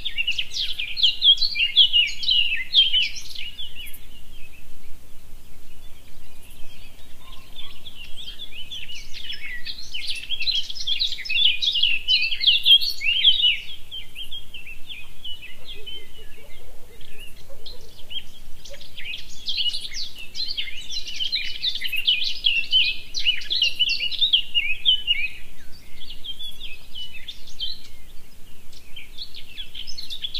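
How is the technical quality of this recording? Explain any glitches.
No technical glitches can be heard anywhere in this recording of sounds. There is nothing here that needs explaining.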